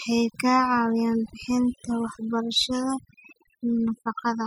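From start to finish the speech carries overdone noise removal: an aggressive denoiser gated away every frequency band near its noise estimate, taking quiet speech detail too. The background becomes near silence with twinkling specks. A spectrogram shows blank gaps scattered with isolated bright dots.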